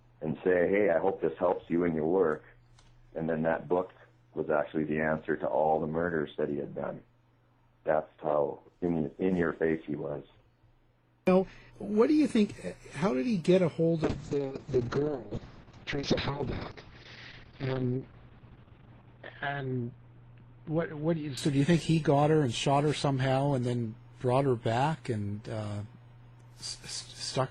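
From 14.05 s to 23.67 s a call bitrate drop makes the sound coarse and watery, with the top end shrinking from 20 kHz to 6 kHz, consistent with a fall from about 128 to 6 kbps. Unlike a plain low-pass filter, the grainy coding roughness worsens and then eases, bottoming out for 4.8 s.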